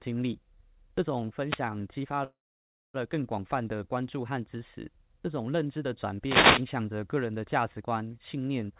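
At 1.45 to 1.62 s a short swish of static rises over the speech, and at 6.22 to 6.67 s a longer burst of static rises over it. This is a wireless microphone noise hit: the analogue FM radio signal faded as reflections cancelled, letting receiver noise through.

From 2.24 s the sound smears into a brief fading buzz and then drops to silence for about 0.6 s before resuming at 2.96 s exactly where it stopped. About 0.7 s has been inserted and nothing is lost. This call audio freeze was likely caused by delayed packets emptying the jitter buffer, which filled the wait with a fading continuation and then silence. The call path's narrow band, with nothing above 4 kHz, fits a telephone-grade codec.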